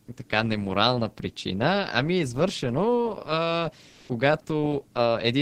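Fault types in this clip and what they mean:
Comfort noise in place of the background: from 3.89 to 4.09 s, a 200 ms pause in the speech holds a steady, featureless hiss instead of the real background, within about 1 dB of its level. This is likely Opus discontinuous transmission synthesising fill noise, whereas a gate leaves true silence.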